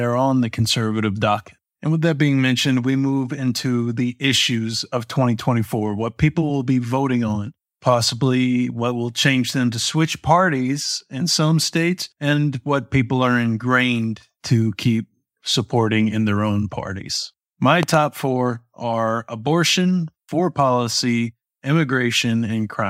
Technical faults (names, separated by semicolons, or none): loud pop